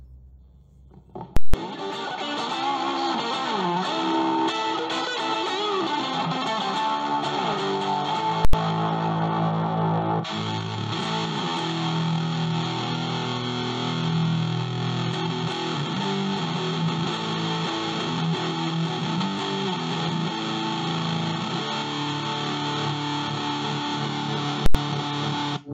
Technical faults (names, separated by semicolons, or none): invalid numbers at full scale